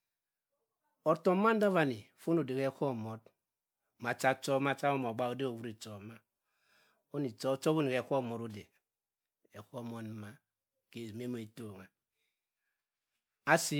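Throughout the speech there is generation loss: a swirly, hollow, smeared quality with blurred consonant attacks, worse than a single MP3 pass at 128 kbit/s would leave. This is likely from repeated MP3 re-encoding, around five times, with noise and spectral holes accumulating.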